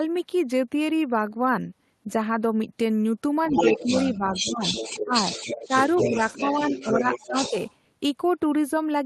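From 3.44 s to 7.73 s, a second voice sits underneath the main talker. This is the other side's voice leaking through, most likely because the talker's loudspeaker played the other side back into the microphone and the echo canceller left residue behind. It runs only a few decibels below the main speech. On a spectrogram it shows as a second set of harmonic stripes interleaved with the talker's. In the waveform it fills the gaps where the envelope would otherwise drop.

Within that stretch, the main talker repeatedly dips. This is speech suppressed in double talk, likely because the canceller could not tell the two voices apart and attenuated both. The dips fall at 3.49–3.93 s (a shallow drop of about 5 dB), 4.11–4.65 s (about 10 dB), 5.03–5.14 s (the deepest, about 15 dB), 5.68–5.74 s (about 10 dB), and 5.97–7.55 s (about 10 dB, in pieces). They sound like the voice briefly receding or fluttering. 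In the waveform they appear as notched envelopes. On the spectrogram, the talker's energy fades in patches, seen against a top band that stops around 12 kHz, as an Opus call path would give.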